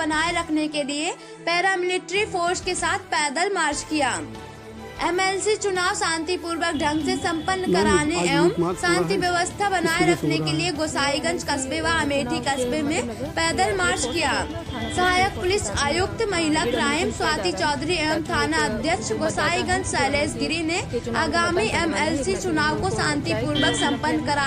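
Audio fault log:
Nothing stood out on listening to this recording.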